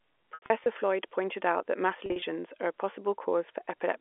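Brief buzzy, held stutters from 0.34 to 0.66 s and again from 2.06 to 2.22 s, between "pointed out that mass" and "are a", are packet loss with pitch repetition: the receiver loops the last pitch period to cover the short gaps.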